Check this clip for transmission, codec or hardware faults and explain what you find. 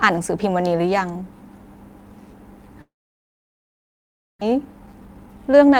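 Two transmission faults are present in this speech clip.

From 2.81 s to 4.43 s there is what sounds like a long network dropout, likely caused by packets failing to arrive for about 1.6 s. The last sound briefly stretches and fades, then roughly 1.5 s of silence follows. When the speech resumes, about 0.92 s is simply gone. A short packet-loss glitch would conceal and recover within tenths of a second. This gap is far longer and leaves a clear hole.

From 4.51 s to 5.77 s a jitter buffer speed-up follows. The delayed audio has piled up, and the receiver trims short pitch-period pieces repeatedly, about 150 ms in total. The speech plays at 111% speed and sounds hurried. The pitch stays unchanged, which distinguishes it from a clock or sample-rate mismatch.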